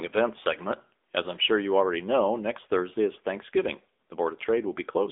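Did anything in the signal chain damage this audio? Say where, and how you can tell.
Yes. The damage is at the codec stage: the speech passed through the AMR narrowband mobile codec for the whole clip. The audio is confined to a 300 Hz to 3.6 kHz band with nothing above 3.7 kHz, and its clearly buzzy, synthetic texture fits a low-bitrate mode of about 8 kbps, where pulse-driven vocal-tract modelling replaces the real waveform.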